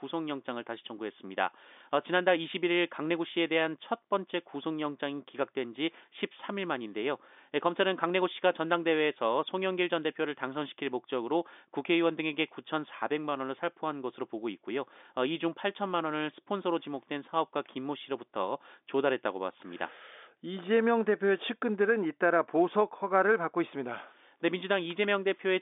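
Nothing stood out on listening to this speech, which comes across the telephone-band G.711 line with nothing heard above about 3.7 kHz.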